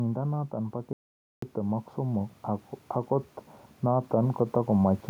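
From 0.5 s the speech and the room behind it swell together, climbing by about 6 dB until 2.75 s. This is automatic gain rising: the gain control judged the input too quiet and eased its gain upward over more than two seconds, so the level creeps rather than jumps. A second, gentler rise of about 4 dB runs from 3.81 s to 5.05 s, again lifting voice and background as one.

Inside the first rise, at 0.93 s, the sound cuts off mid-flow and returns at 1.42 s. The gap of about 0.49 s is dead silence with no room tone at all, and the speech in it is simply gone. This is an audio dropout to silence, likely from the input signal being lost for that half-second, through a disconnection, a failed link or a momentary mute, while the recorder kept writing silence.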